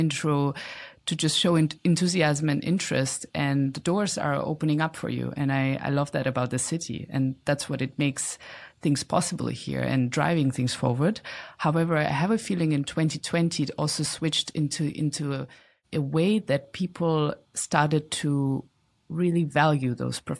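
Listening closely to the speech, nothing stood out as a technical problem at any point.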